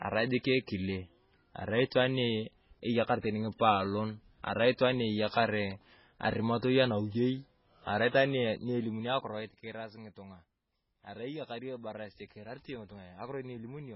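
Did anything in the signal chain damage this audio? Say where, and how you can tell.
Yes. A low-bitrate codec stage is the likely cause: it cuts everything above 5.5 kHz and leaves heavy watery, swirling MP3 compression artefacts, which fits around 16 kbps.

A level change without smoothing, from 8.36 to 9.87 s after "arimatoi anawiyei arai itwaan", drops about 15 dB in 1 dB steps, around ten per second, producing audible zipper noise.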